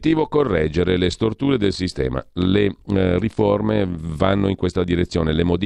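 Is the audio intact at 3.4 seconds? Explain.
No. Overlap-add ripple runs through the whole clip, including 3.4 s. Frames rejoined at the wrong overlap swing the level about 6 dB around 50 times a second, giving a fast, rough flutter, not the irregular gaps of dropouts.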